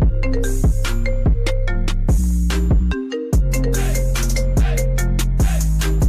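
Nothing is technically wrong with this audio.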